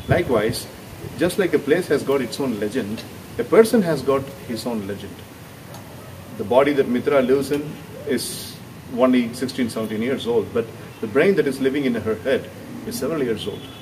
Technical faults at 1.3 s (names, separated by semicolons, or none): timecode bleed